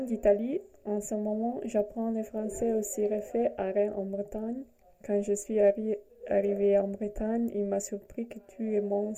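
Nothing technically wrong turns up in this audio: there are no dropouts, glitches or other faults anywhere in it.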